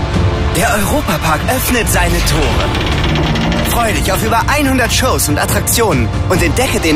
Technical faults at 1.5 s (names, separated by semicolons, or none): adaptive stream starting at a low bitrate